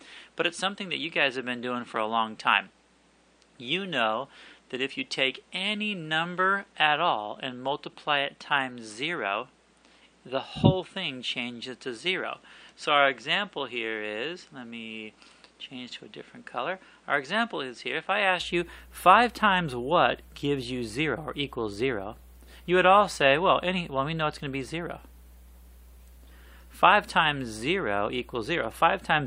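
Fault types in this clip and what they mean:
Input switched to a poorer device: For the first 18.4 s the sound is dull and slightly quieter, with nothing above 9.5 kHz, a level about 5 dB lower and a faint background noise of its own, roughly 35 dB below the signal. At 18.4 s it opens up and brightens with no gap. The likely cause is that recording began on a narrower-band input, such as another microphone or a headset's call profile, before switching to the main device.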